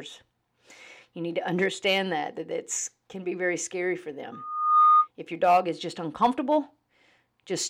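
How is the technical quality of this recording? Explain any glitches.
One glitch stands out in the speech, a loudspeaker feedback squeal. From 4.32 to 5.08 s a pure tone near 1.2 kHz swells over about half a second to roughly 10 dB above the voice. A microphone hearing its own loudspeaker let loop gain exceed unity there, so that frequency kept growing.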